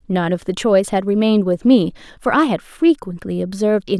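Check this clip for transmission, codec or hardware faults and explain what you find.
Nothing found on listening: the speech carries no audible transmission, codec or hardware fault.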